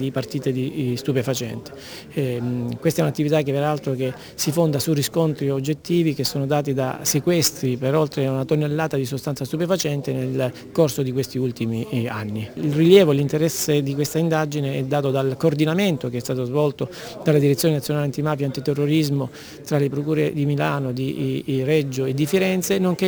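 Imaging from sample-and-hold upsampling throughout: samples repeated unfiltered from 22 to 48 kHz mirror the spectrum into 11–22 kHz, about 22 dB down, as metallic fizz.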